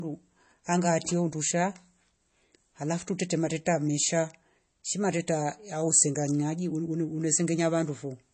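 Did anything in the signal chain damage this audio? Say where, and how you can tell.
Yes, at the codec stage: throughout the speech, watery, swirly artefacts and a hard 8.3 kHz ceiling, visible as a flat spectrogram edge, point likely to MP3 compression at a low bitrate around 32 kbps.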